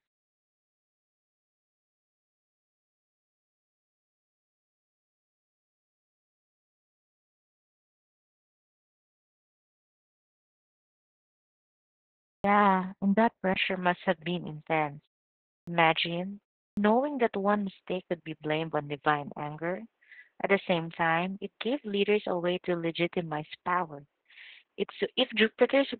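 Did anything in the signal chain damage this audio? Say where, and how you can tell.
Yes. Throughout the clip the speech sounds muffled, hoarse and faintly robotic, with nothing above about 4.6 kHz. This is codec damage from Opus voice compression in narrowband mode. The sound fits the SILK linear-prediction coder running at a very low rate, around 8 kbps. At that rate the encoder cuts the band to roughly telephone width and quantises the excitation so coarsely that the voice's natural texture turns buzzy and smeared.

At 12.4 s, after silence from the very start, "and that" begins abruptly, missing its opening. The same thing happens at 15.63 s after a 0.64 s pause and at 16.73 s after a 0.36 s pause. Each time roughly 42 to 44 ms is swallowed. This is a clipped start after a pause, a playback or driver-stage fault. The output device sleeps during silence and needs a few tens of milliseconds to wake before it passes sound.

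Just after "and that", at 13.54 s, there is a brief dropout of about 20 ms. From there to the end the speech sounds duller and narrower, with nothing above about 3.8 kHz. A new, very faint background noise appears, roughly 55 dB below the speech, and the level stays about the same. This points to the input being switched to a poorer device mid-recording, likely a lower-quality microphone or a headset's call profile. The system re-routed capture, and the new device has its own narrower bandwidth and noise floor.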